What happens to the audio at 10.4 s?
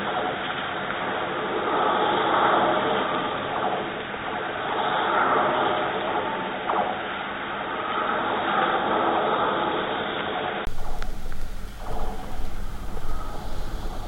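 At 10.4 s the sound is still dull and boxy, with nothing above 3.8 kHz, from 0.0 to 10.67 s. The likely cause is an input switched to a poorer device. A simple filter would not also change the level and noise floor or end with a 20 ms gap.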